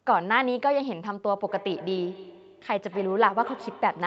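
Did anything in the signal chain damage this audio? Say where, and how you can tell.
Yes. From 1.36 s right through to the end of the speech there's a feedback echo between two devices, an acoustic loop at the call stage rather than anything in the wiring or codec. Each word comes back roughly a fifth of a second later, at a steady spacing, peaking about 16 dB below the direct speech. That's one device's speaker playing the call into a second device's microphone, which the second device's echo canceller doesn't remove, since it only cancels what its own speaker plays. The audio above 8 kHz is cut off by the call path, which is normal.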